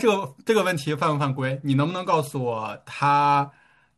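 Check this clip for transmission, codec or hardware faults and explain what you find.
There's one fault here, a Bluetooth SBC bit pool drop running from 0.74 s right through to the end of the speech. The link looks to have got congested, so the encoder cut its bit budget, which fits a fall from a bit pool of 31 down to around 14, near 99 kbps. With so few bits the top sub-bands get starved and everything else is quantised coarsely, so from that point the treble goes dull and a gritty noise creeps in underneath.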